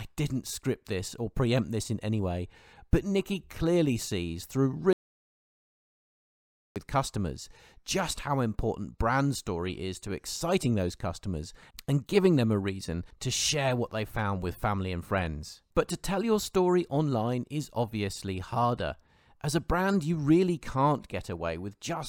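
An audio dropout to silence runs from 4.93 to 6.76 s, about 1.83 s of silence with no room tone. The speech resumes mid-flow at "customers just how important". The input was likely lost while recording continued writing silence.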